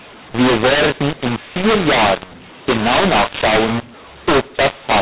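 Throughout the speech, mu-law and A-law are mixed up. A-law telephone samples are decoded as mu-law. Levels scramble, speech turns harsh, and pauses fill with noise.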